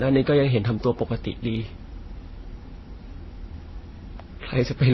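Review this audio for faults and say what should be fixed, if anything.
Transcoding between lossy codecs, throughout the speech: the audio carries nothing above 5.9 kHz, and several layers of compression artefacts sit on top of each other, heard together at once. The likely cause is a chain of low-bitrate encodes, which fits MP3 at around 24 kbit/s, then Vorbis at a similar rate, then AAC-LC at around 32 kbit/s. Each later encoder spent its bits reproducing the earlier damage while adding its own, and the lowest cut-off in the chain survived to the end. To prevent it, keep a lossless master and encode once, directly from it, to the final format.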